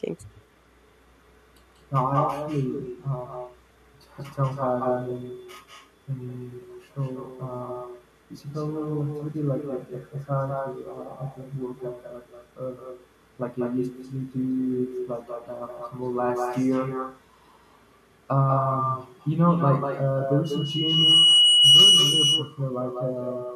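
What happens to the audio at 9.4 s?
Echo with no canceller is present at 9.4 s, as it is throughout the clip. The far end's loudspeaker feeds the speech back into its microphone uncancelled, so each phrase returns about a fifth of a second later, about 7 dB quieter, sounding thinner.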